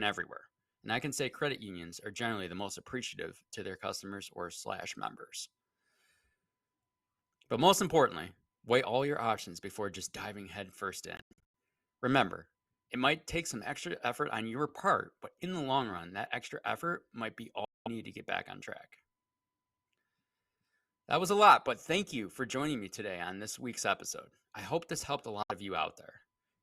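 Audio packets likely failed to reach the Bluetooth headphones in time and were discarded, and the output went silent until good packets resumed, picking up as though playback had continued. This Bluetooth dropout first hits after "before just diving headfirst" at 11.17 s, as a cluster of short gaps, the longest about 93 ms, spread to 11.43 s. It returns after "extra effort might be" from 17.65 to 17.88 s, before "need to get back", and after "hope this helped a" at 25.43 to 25.52 s.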